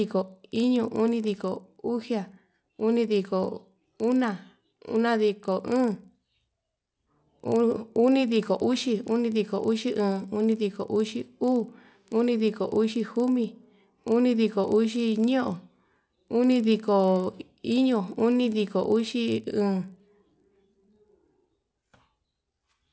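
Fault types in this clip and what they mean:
resampler restarted on every block: a 25 Hz buzz that sounds only with signal; each 40 ms block was resampled alone, leaving an error at every block edge.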